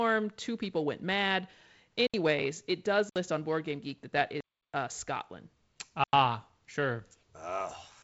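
The output buffer was likely not filled in time, so this speech clip has four blocks of digital silence, cutting out with no fade: after "people went mad" at 2.07–2.14 s (67 ms), after "it does" at 3.09–3.16 s (64 ms), after "that that" at 4.41–4.74 s (332 ms), and at 6.04–6.13 s (93 ms, which fits a 4096-sample buffer).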